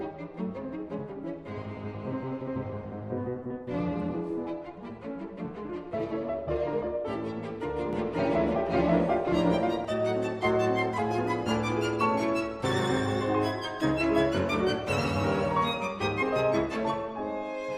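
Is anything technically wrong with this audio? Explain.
Yes. From 7.93 to 9.85 s the sound is doubled: a second full-band copy trails about half a second behind, at roughly equal loudness, with no decay or room colour, cutting in and out abruptly. This doubled audio track is likely a second, slower capture path or a misaligned edit.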